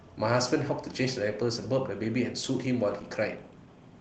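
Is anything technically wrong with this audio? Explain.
No, the speech carries no technical fault, and the Opus voice compression it passed through leaves only light coding traces while keeping the full audio band.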